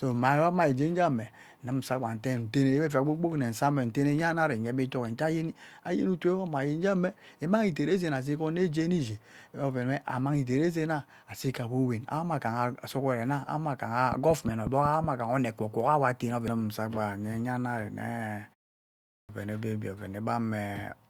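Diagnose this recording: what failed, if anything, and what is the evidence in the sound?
A train of clicks runs from 14.12 to 15.05 s: roughly seven near-identical pops at a regular 5.5 per second, peaking at about 15 dB above the speech. That steady pacing is likely interference from nearby equipment leaking into the analogue wiring.

At 19.20 s there's a clipped start after a pause. After 0.74 s of silence, the first 89 ms of speech is missing, so the onset jumps in abruptly. That's the playback device dozing off in the gap and not waking fast enough.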